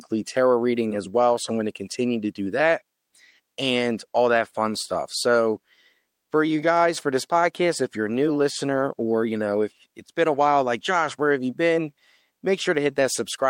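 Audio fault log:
7.53 s pre-echo: the codec evidently kept a long transform block, about 26 ms, instead of switching to short blocks. Noise sized for the attack just after "you guys for this" spills about 13 dB of hiss into the 12 ms before it, softening the onset ahead of "if you're a new".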